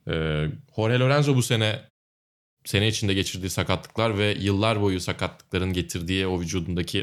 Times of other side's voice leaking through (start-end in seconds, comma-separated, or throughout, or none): none